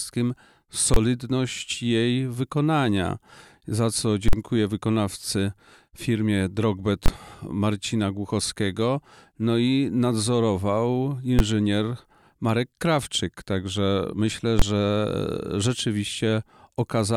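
The audio is hit five times by invalid numbers at full scale: 0.94–0.96 s, 4.28–4.33 s, 7.06–7.08 s, 11.39 s and 14.59–14.62 s. A processing stage output infinite or invalid values, which clipped to maximum amplitude for about 23, 46 or 12 ms, which fits blocks of 1024, 2048 and 512 samples, and each is heard as a sharp bang.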